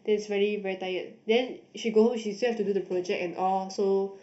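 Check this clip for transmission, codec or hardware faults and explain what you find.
One fault runs throughout. Channel delay (comb filtering): one channel lags by under half a millisecond, and the mono sum cancels near 1.5 kHz and above. The speech sounds hollow and phasey.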